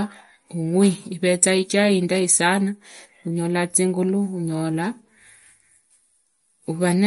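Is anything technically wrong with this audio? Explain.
Yes. Throughout the speech, the top end stops dead at about 11.2 kHz, leaving the voice dull and boxed-in, and the damage is plainly audible: a watery, swirling texture with metallic chirps on s sounds and softened consonant attacks. The likely cause is MP3 compression at a low bitrate, with the damage pointing to around 48 kbps. Starved of bits, the encoder cut everything above that fixed frequency and dropped quiet spectral lines that flicker on and off between frames, producing the swirl.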